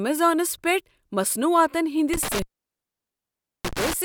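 A speech clip with an intermittent contact: after "پیٹھ مصنوعاتن", at 2.13 s the signal crackles and drops out, with the line open for about 1.22 s within the 2.13 to 3.93 s span, consistent with a loose cable or plug.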